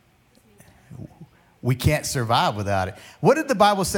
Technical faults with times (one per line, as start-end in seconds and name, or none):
none